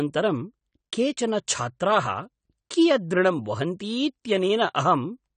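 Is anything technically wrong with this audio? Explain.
Yes, the speech carries audible AAC compression damage throughout. The likely cause is low-bitrate AAC-LC coding, consistent with roughly 32 kbps: a spectrogram shows nothing above 9 kHz, plus patchy high bands, giving dull, smeared, warbly sibilants.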